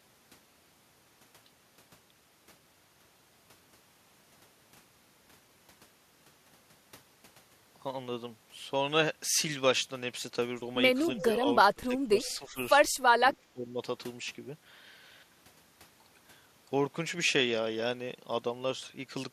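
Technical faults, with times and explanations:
11.18–11.26, 11.72–12.18, 12.38–12.58, 13.19–13.23 and 13.42–13.78 s, speech suppressed in double talk: the speech dips in a cluster of partial cuts, from a slight dip of about 5 dB to drops of about 20 dB. The echo canceller likely mistook the near talker for loudspeaker echo while both sides spoke and pulled the level down. Unlike packet-loss dropouts, these are graded dips that follow the speech rather than clean silent gaps.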